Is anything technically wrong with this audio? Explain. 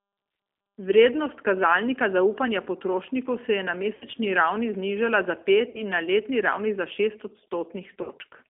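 Yes. The whole clip has G.729 codec damage, and packet loss concealment breaks in three times.

G.729 codec damage runs throughout. The speech is confined to roughly 250 Hz to 3.5 kHz. It sounds rough and synthetic, rebuilt from a filter, a pitch predictor and a few pulses. That points to an 8 kbit/s G.729A line.

VoIP packet loss concealed by the speech codec occurs three times. The first is at 3.95 to 4.05 s, after "potrošnikov se je na". The second is at 5.69 to 5.82 s, after "ravni znižala za". The third is at 8.02 to 8.10 s. Each gap is 60 ms, which fits three lost packets. The decoder extends the last sound into a fading buzz or coloured noise, and the voice stays weak briefly afterwards.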